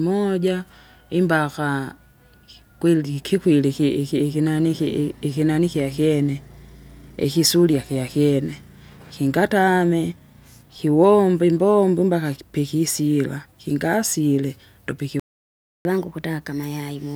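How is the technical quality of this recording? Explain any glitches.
Two linked glitches affect the last two seconds of this speech recording.

Playback stall, 15.20 to 15.85 s: the speech cuts out mid-flow for about 0.65 s, with silence in place of sound. The likely cause is the player running short of buffered data or having its audio thread blocked, so the output falls silent until it recovers.

Catch-up at higher speed, 15.85 s to the end: once playback resumes, the player works through its backlog by resampling at 1.15 times normal speed. The speech sounds hurried and roughly two semitones higher, and stays that way to the end of the clip.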